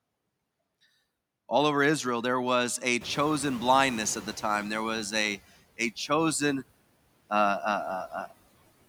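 Noise suppressor artifacts run through the whole speech clip: the steady background is pulled down by about 21 dB, sinking between the words and rising under them. Around 3 s, after "there was a", the room noise jumps by about 18 dB, and the noise suppressor catches up slowly: the estimate lags, so the louder noise passes with only about 10 dB of reduction, then sinks over 2.39 s until 5.39 s, just before "a chosen".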